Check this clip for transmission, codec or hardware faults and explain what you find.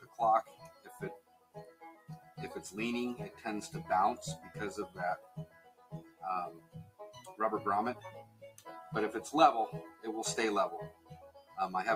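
Two related processing faults run through the clip: a speech noise suppressor treating the material as noise, and the sounds it cuts hardest.

Noise suppressor applied to music or sounds: throughout, held tones and tails are pulled down by roughly 15 dB while attacks pass, so level pumps; a waveform shows envelopes collapsing after each onset.

Sound cut by the noise suppressor: at 0.0–0.19, 0.43–2.37, 5.18–6.23, 6.57–7.0, 8.24–8.66 and 10.92–11.57 s, steady sound sinks by about 11 to 16 dB, appearing on a spectrogram as dark, hollowed bands.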